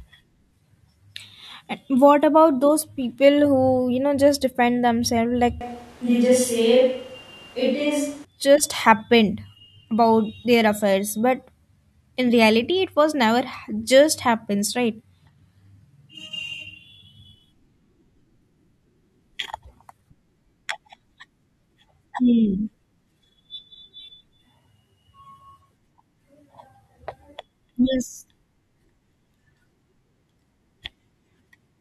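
A speech recording where the close microphone's signal drops out from 5.61 s to 8.25 s and the audio likely falls back to a more distant pickup, a switch to a distant microphone, starting just after "just defend themselves like" and returning before "just happened about their". For that stretch the voice turns abruptly roomy and hollow, with thinner bass and background noise rising to roughly 30 dB below the speech, while the overall level stays about the same. Both changeovers are sudden.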